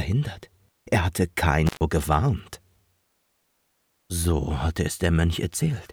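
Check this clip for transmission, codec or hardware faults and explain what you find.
One hardware fault is present: an intermittent contact between 1.66 and 1.81 s. For roughly 121 ms a loose cable or plug connection opens and the signal path is broken, so the sound drops out abruptly instead of fading. Crackle marks both edges of the gap as the contact breaks and remakes, and faint hiss remains while the line is open. Program audio returns once the connection closes again.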